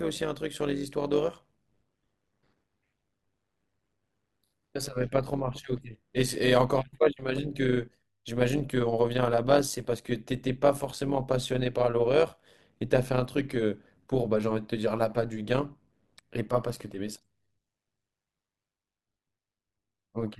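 From start to end, the speech carries overlap-add ripple. The frames were rejoined with overlapping windows that do not sum to a steady gain. Level dips and swells by about 11 dB once per frame, around 100 times a second. This sounds like a rough, metallic buzz.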